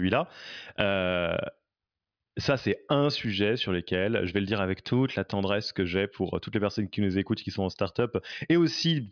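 Nothing technically wrong turns up anywhere in this speech recording, so there are no problem spots or causes to point to.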